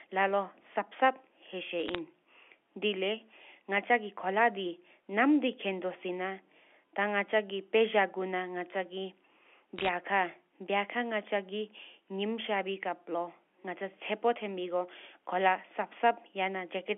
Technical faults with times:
1.86-1.98 bit errors on a digital phone line
9.77-9.89 bit errors on a digital phone line

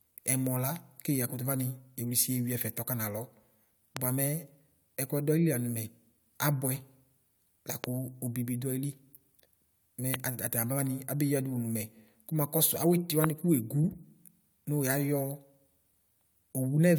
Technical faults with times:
3.97-3.99 loud pop
7.84-7.86 loud pop
10.14-10.16 loud pop
13.24-13.26 loud pop

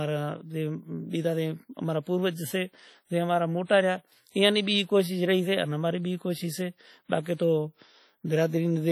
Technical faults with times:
0.00-8.91 WMA compression

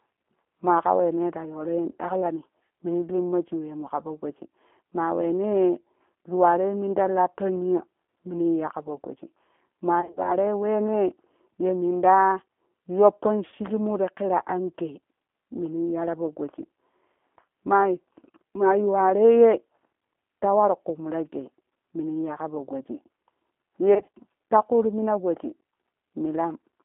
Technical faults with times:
0.00-26.85 G.729 codec
10.01-10.35 VoIP packet loss concealed by the speech codec
13.48-13.55 VoIP packet loss concealed by the speech codec
23.94-24.09 VoIP packet loss concealed by the speech codec

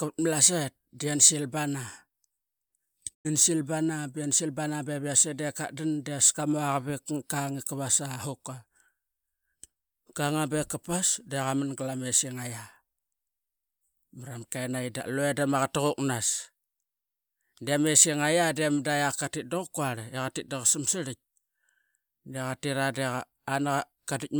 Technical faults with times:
3.13-3.27 digital broadcast dropout

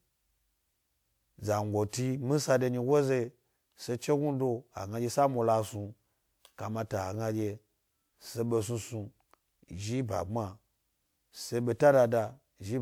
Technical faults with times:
1.89-1.93 pre-echo

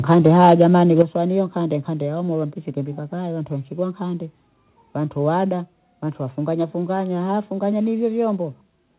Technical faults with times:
0.11-0.63 microphone overload
1.00-1.02 microphone overload
1.02 microphone volume stepped down
5.49 microphone volume stepped down

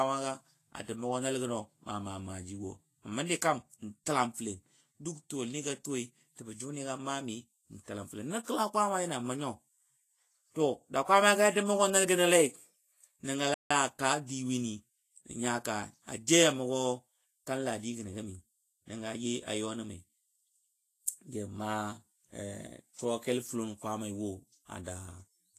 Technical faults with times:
0.00-25.58 Vorbis compression
13.54-13.70 playback stall

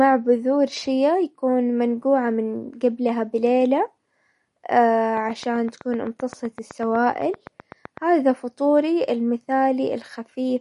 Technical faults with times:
0.00-10.61 MP3 compression
5.17-7.98 train of clicks

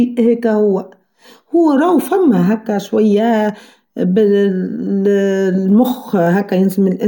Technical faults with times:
none

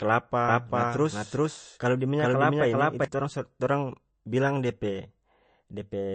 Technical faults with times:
0.00-6.14 MP3 compression
0.49-3.05 doubled audio track

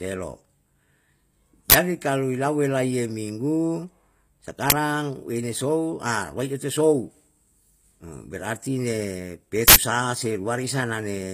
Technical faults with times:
0.00-11.34 HE-AAC compression
1.70-1.74 uninitialised buffer
4.70 uninitialised buffer
9.68-9.76 uninitialised buffer

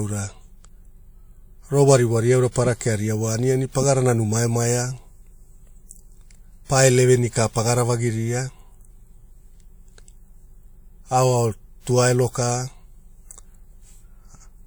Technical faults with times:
0.00-14.67 low-bitrate audio saved at a high bitrate

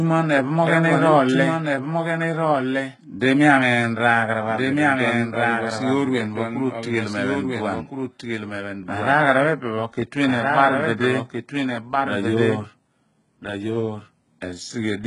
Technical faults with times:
0.00-15.06 doubled audio track
0.00-15.06 HE-AAC compression

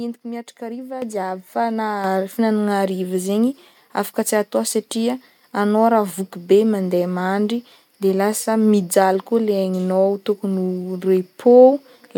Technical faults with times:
1.02 microphone volume stepped up
2.04 microphone volume stepped up

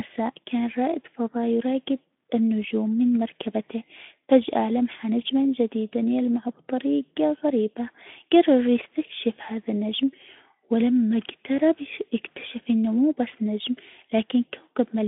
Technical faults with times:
none

